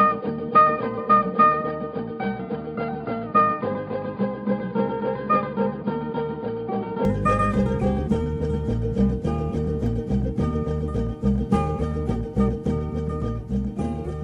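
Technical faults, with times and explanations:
0.0–7.05 s, input switched to a poorer device: for the first seven seconds or so the sound is dull and boxy, with nothing above about 4.9 kHz. Then at 7.05 s it opens up cleanly, with no gap and no real jump in level. That's most likely the recording starting on a narrower-band input, like a headset call profile, and then moving to the proper microphone. The poorer device's own noise floor sits far down, roughly 55 dB under the signal.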